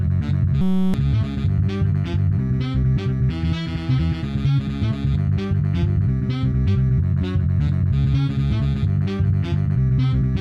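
From 0.61 to 0.94 s, a system hang loop replaces the sound with a steady 188 Hz buzz. A 5.33 ms slice, fitting a 256-sample buffer, repeats while the driver stalls.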